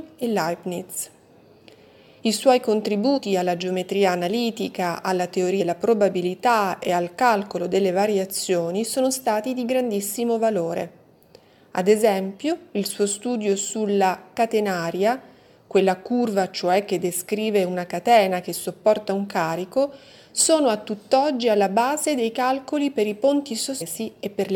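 Three brief blips break the sound, at 3.16 to 3.18 s, 5.60 to 5.62 s and 23.80 s. Each is damaged data in the compressed stream. The decoder hits bad bytes, loses frame sync and hunts for the next header. A short chirp, squawk, click or hole results.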